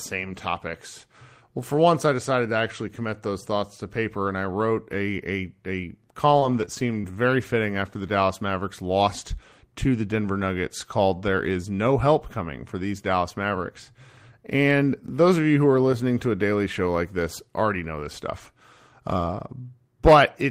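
A few packets went missing or arrived late between 6.31 and 7.13 s, just before "fitting after the". About three small holes, the longest roughly 20 ms, were covered by extending the preceding sound, leaving brief ticks and smears in this scattered short gaps stretch.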